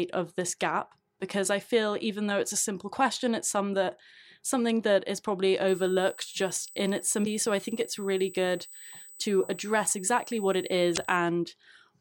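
From 5.68 s to 11.17 s a steady 8 kHz tone sits about 20 dB below the sound: USB whine, from the bus's 125 microsecond microframes leaking in through power or ground. At 7.23 to 7.27 s and again at 10.94 to 10.98 s, brief glitches mark damaged data in a compressed stream, where corrupted frames threw the decoder out of sync until it found the next header.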